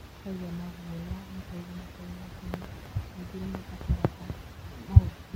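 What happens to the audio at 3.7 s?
Nothing goes wrong at 3.7 s; the speech is intact there.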